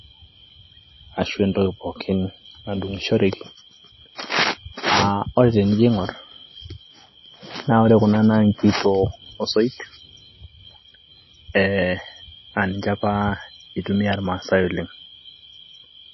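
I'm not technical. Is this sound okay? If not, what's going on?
No. Throughout, the speech sounds watery and dull, with nothing above 5.8 kHz. This is likely heavy MP3 compression discarding detail to save space.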